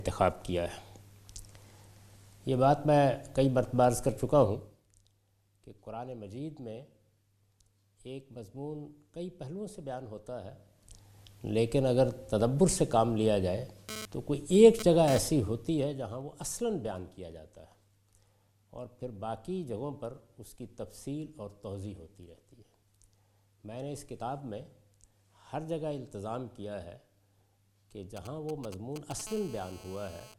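At 4.44 to 4.84 s the level falls by roughly 15 dB in unsmoothed 1 dB steps at around 50 per second, producing zipper noise: a fast ticking riding on the sound. From 13.89 to 15.19 s a raspy, harmonic-rich GSM phone buzz at 217 Hz sits about 12 dB below the signal, pulsing irregularly as a nearby 2G handset transfers data and the audio circuitry rectifies its bursts. At 28.17 to 29.21 s, GSM signalling bursts from the same kind of source produce a galloping dit-dit-dit of short 217 Hz buzzes, about 10 dB below the signal. From 29.27 to 30.34 s this settles into a steady GSM phone buzz about 14 dB down, consistent with a call in progress.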